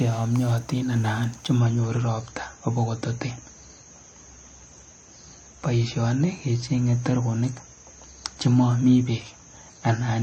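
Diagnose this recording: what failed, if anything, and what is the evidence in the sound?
The stream dropped to a lower bitrate at 1.59 s: the treble suddenly collapses, with nothing above 8.3 kHz and more codec swirl, through to the end. There's no gap, just a network-driven switch to a leaner encode, which fits MP3 falling from about 128 to 32 kbit/s.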